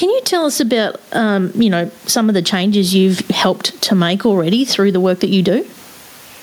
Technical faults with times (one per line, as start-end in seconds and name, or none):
0.00-6.42 gain pumping